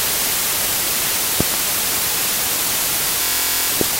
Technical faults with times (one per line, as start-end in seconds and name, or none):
1.40-1.56 loud pop
3.23-3.69 system hang loop
3.81-3.83 loud pop